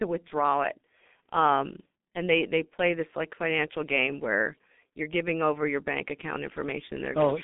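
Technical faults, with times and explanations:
Throughout, G.723.1 codec: speech band-limited to roughly 200 Hz to 3.6 kHz; heavy coding at about 6.3 kbit/s in 30 ms frames leaves hoarse voicing and smeared consonants.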